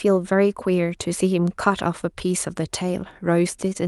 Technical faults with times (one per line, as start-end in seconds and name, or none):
none